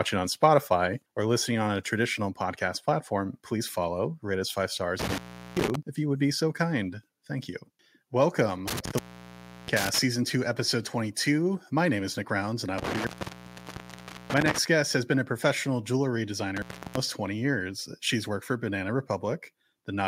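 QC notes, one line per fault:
0.44–0.46 s, microphone overload: the loudest peak gets a brief harsh, crackly edge, with only a small share of samples flattened at about 1 dB over the limit. The likely cause is input gain set high enough that the converter squared off the waveform tops. This differs from contact faults because the sound keeps going while it distorts.
1.02 s and 6.48 s (the second just after "if you would be"), microphone volume stepped down: the sound and the background both drop in level together and stay lower, by about 3 dB and then about 1 dB. The likely cause is the call software cutting the device's input gain in one step. There is no gap or crackle, only a lasting change in level.
4.99–5.75 s (after "follow rate us five", before "if you would be"), 8.68–9.99 s (before "two episode"), 12.78–14.58 s and 16.57–16.97 s, intermittent contact: the sound cuts out with crackle at each edge, leaving faint hiss for 388 ms, 692 ms, 1.23 s and 334 ms. 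This points to a loose cable or plug opening briefly. These are true dropouts, not drops in level.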